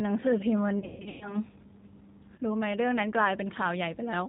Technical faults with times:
0.00-4.29 G.729 codec
0.79-1.36 VoIP packet loss concealed by the speech codec
2.35-2.40 VoIP packet loss concealed by the speech codec

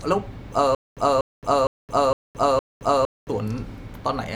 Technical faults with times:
0.75-3.30 stutter with silent gaps

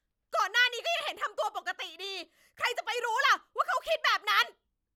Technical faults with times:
none

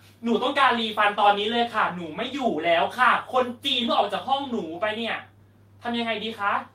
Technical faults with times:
none

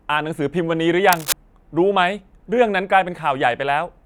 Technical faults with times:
1.12-1.33 cable scratch noise

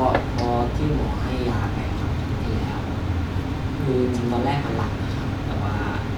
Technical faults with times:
none

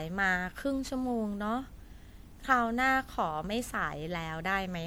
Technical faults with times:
0.00-4.86 generation loss

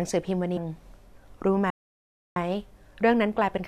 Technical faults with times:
0.56 damaged data in a compressed stream
1.70-2.36 playback stall

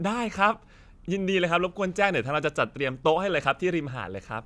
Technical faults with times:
none

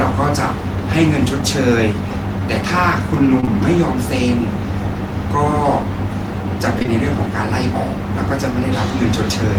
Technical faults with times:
3.40-3.49 short concealed packet loss
6.79-6.89 short concealed packet loss

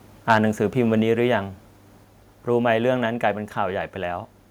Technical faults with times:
0.30-0.37 microphone overload

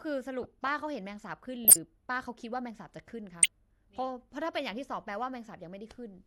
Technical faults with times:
0.43-0.48 corrupt frame decoded
1.65-1.76 corrupt frame decoded
3.32-3.46 corrupt frame decoded

